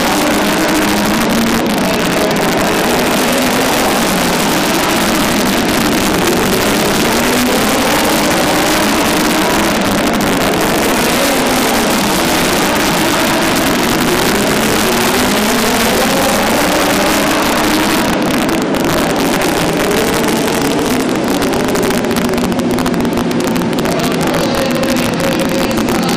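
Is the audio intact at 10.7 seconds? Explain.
No. Sharp, violent cracks burst from the loudest peaks around 10.7 seconds and throughout: integer overflow, where signal driven about 3 dB too hot wraps to the opposite sign instead of limiting.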